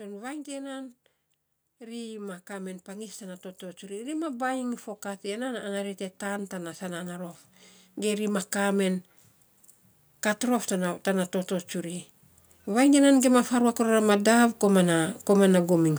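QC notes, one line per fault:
1.65–7.41 s and 11.92–15.94 s, automatic gain rising: the gain control judged the input too quiet and lifted its gain slowly, about 12 dB then about 7 dB, so speech and background noise swell together. The waveform envelope and spectrogram noise floor brighten steadily across each span.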